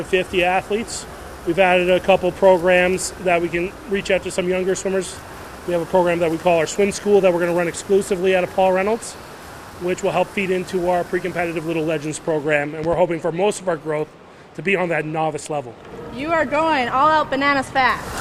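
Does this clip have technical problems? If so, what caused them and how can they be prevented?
Yes, there's a loud pop at 12.84 s, actually two quick pops running to about 12.96 s, sitting a few dB above the sound, which carries on underneath. The likely cause is a sudden voltage step or pulse, say from a plug being seated, a switch, a static discharge or a driver glitch, which the downstream circuitry shaped into a short double thump. To prevent it, keep connectors and switches untouched while recording and make sure everything's properly grounded.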